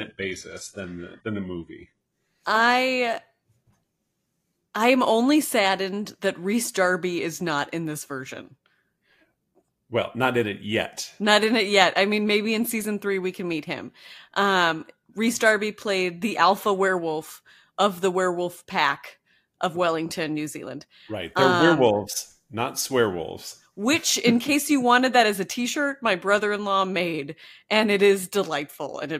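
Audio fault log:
0.0–2.0 s, adaptive stream starting at a low bitrate: the speech opens thin and smeared, with synthetic-sounding treble, fitting a roughly 12 kbit/s HE-AAC start. At 2.0 s it jumps cleanly to fuller sound, fitting 96 kbit/s AAC-LC. On a spectrogram, the upper band suddenly fills in above the earlier cutoff of about 11.5 kHz.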